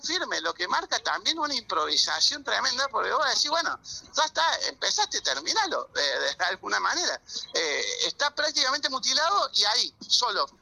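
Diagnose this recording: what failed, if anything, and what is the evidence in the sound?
Clock slip clicks run from 0.15 s to 10.59 s as faint, evenly spaced ticks about ten times a second, around a hundred in all, sitting on top of the sound. The stage is the converter clocking. The likely cause is two devices free-running on separate clocks that disagree by roughly 200 ppm. Each time that mismatch accumulates to one full sample, a single sample is dropped or repeated, which produces the regular tick.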